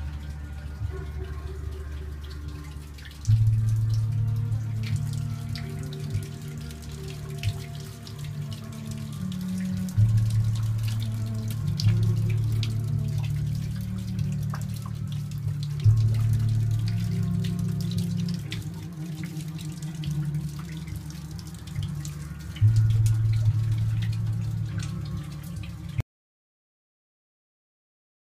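An audio dropout to silence begins at 26.01 s and runs to the end of the clip at 28.30 s, about 2.3 s of nothing. The sound stops abruptly in mid-flow, and what follows is silence, with no room tone or noise floor. The input was most likely lost, through a disconnected device, a failed link or an accidental mute, while recording carried on writing silence, so whatever happened in those final seconds is gone.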